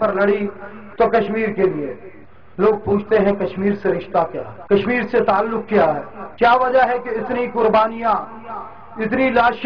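No technical faults are audible.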